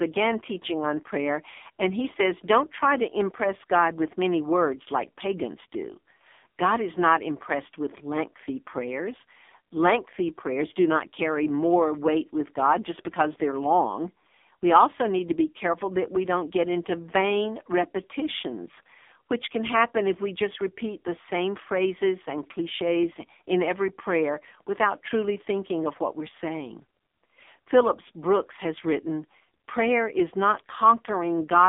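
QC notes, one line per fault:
throughout AMR narrowband mobile codec: The audio has been through a low-rate mobile speech coder. Nothing is heard above about 3.7 kHz, and the passband sits roughly between 250 Hz and 3.6 kHz, which gives the thin telephone quality. The damage is heavy. The coder rebuilds the voice from a vocal-tract model excited by sparse pulses, so the result sounds buzzy and synthetic, consistent with a bitrate near 5.9 kbps.
19.80 hard clipping: A brief overload between "vain repetitions which can" and "if we just repeat". For about 13 ms the peaks exceed what the signal path can pass by about 1 dB, so they are cut flat. The flattened tops add high harmonics, heard as a short crackle on the loudest part of the waveform rather than sustained fuzz, because the overdrive is small and brief.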